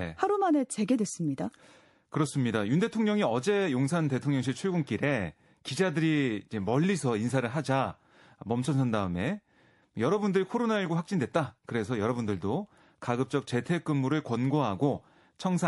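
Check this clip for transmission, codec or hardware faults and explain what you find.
MP3 compression runs through the whole recording, and the damage is plainly audible. The likely cause is a low-rate MP3 encode, and the artefacts fit a bitrate around 48 kbps. At that rate the encoder runs short of bits, so it zeroes weaker frequency lines that then switch on and off from frame to frame. The speech sounds watery, with a swirling texture, metallic chirps on s sounds, and smeared consonant attacks.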